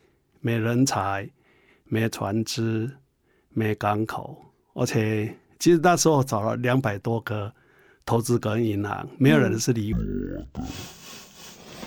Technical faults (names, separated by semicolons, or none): stereo read as mono